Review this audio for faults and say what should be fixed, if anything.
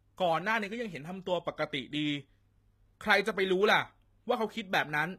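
The speech appears to have gone through a low-bitrate encoder, likely HE-AAC compression at a setting that fits roughly 20 kbps. Throughout the clip, only the lower band is truly coded, and the treble is rebuilt by copying lower bands upward and fitting them to a rough envelope. The top end stays bright, but its harmonics fail to line up with those below the crossover, so s sounds come out gritty, lispy and metallic. To prevent it, encode at a higher bitrate or with plain AAC.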